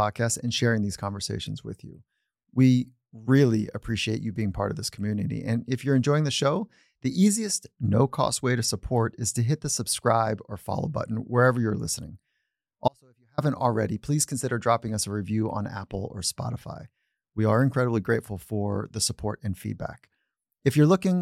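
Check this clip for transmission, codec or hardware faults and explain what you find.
One fault is present. At 12.88 to 13.38 s, just before "already please consider dropping", there is an audio dropout to a faint residue. The speech cuts abruptly to a faint residue around 40 dB down, likely a brief signal loss upstream while the path stayed live. On the waveform it shows as a sudden collapse to a thin band, and on the spectrogram as a nearly empty vertical strip.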